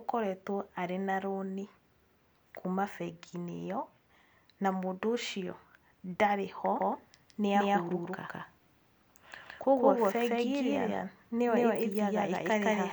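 From 6.79 s, right after "mũndũ ũcio ndarĩ ho", a doubled audio track appears abruptly and persists to the end: a second, equally loud full-band copy of the speech trails by around 150 ms, likely from a duplicated capture path. It sounds like a dry, slapback echo. Spectrogram and waveform show every syllable repeated, time-shifted, without decay.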